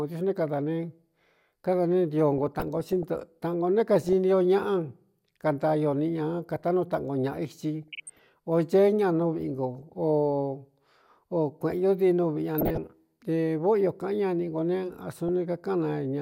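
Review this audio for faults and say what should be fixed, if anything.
DAB burbling at 2.38 to 3.03 s, 4.01 to 4.13 s, 7.82 to 8.19 s, 9.76 to 9.83 s, 12.58 to 12.78 s and 15.29 s. Weak reception lets bit errors of a few tenths of a percent slip past error correction, corrupting samples and scale factors. Wrong samples then put short noise blips into single sub-bands, and wrong scale factors make sub-bands jump in level for up to a frame, over the speech. To prevent it, improve reception with a better-sited antenna or take the programme from a wired or IP feed instead of off-air DAB.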